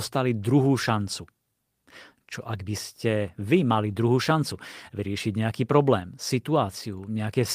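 No technical faults are audible anywhere in the speech.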